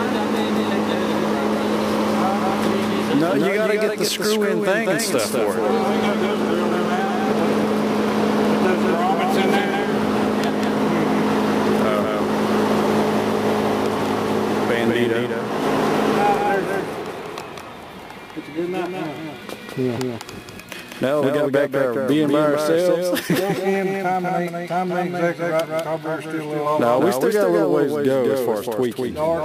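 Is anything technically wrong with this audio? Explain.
Yes. A doubled audio track runs throughout. A second copy trails by about a fifth of a second, roughly 5 dB quieter, likely from a slower capture path.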